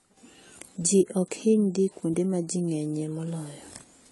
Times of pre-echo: none

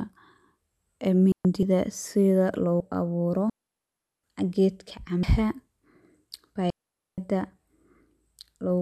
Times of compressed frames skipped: 5.23

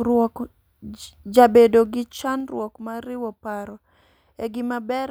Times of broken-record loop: none

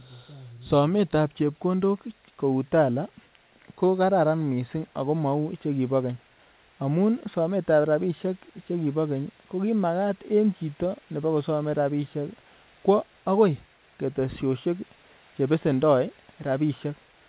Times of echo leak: none

